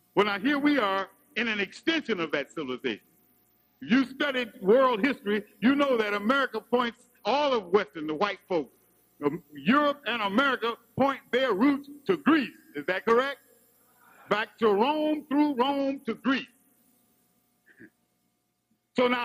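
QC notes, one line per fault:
0.98–4.02 s, 6.85–8.95 s and 15.79–16.76 s, Bluetooth SBC bit pool drop: the treble goes dull and a gritty, grainy noise rises, then clears. The sound fits the link cutting the SBC bit pool from about 28 to 9, around 78 kbps, which starves the top sub-bands and coarsely quantises the rest.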